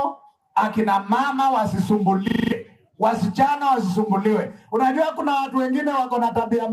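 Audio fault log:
2.28–2.52 s, system hang loop: the same 40 ms piece of audio replays exactly six times, a rapid 25 Hz stutter, as a frozen system leaves the hardware cycling its ring buffer. Exact repetition, not silence, sets it apart from a dropout, and roughly a fifth of a second of audio is lost.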